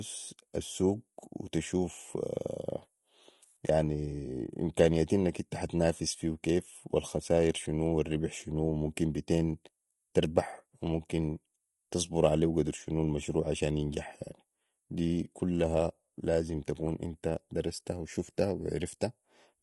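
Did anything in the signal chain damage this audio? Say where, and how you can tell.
Yes, at the codec stage, across the whole clip. The speech has a rough, grainy edge throughout, with noise filling in between the harmonics and a thin, synthetic top end. That's likely low-delay AAC compression: AAC-ELD's short frames smear pitch detail, and the damage fits a bitrate around 32 kbps.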